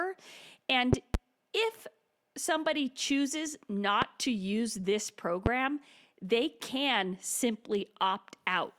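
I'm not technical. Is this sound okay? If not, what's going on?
No. Sharp loud pops jump out over the speech: two between 0.93 and 1.17 seconds, then one each at 4.02–4.05 and 5.46–5.49 seconds. Likely electrical jolts from a plug, switch or static.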